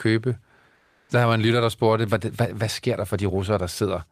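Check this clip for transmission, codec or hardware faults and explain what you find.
One fault is audible: comfort noise in place of the background, from 0.75 s to 1.07 s (about 320 ms). The actual background drops out and is replaced by a steady, featureless hiss sitting about 49 dB below the loudest speech and about 1 dB quieter than the real background. The likely cause is discontinuous transmission in an Opus link. The sender's voice detector treats the pause as silence and stops sending, and the receiver synthesises noise shaped to approximate the background until speech resumes.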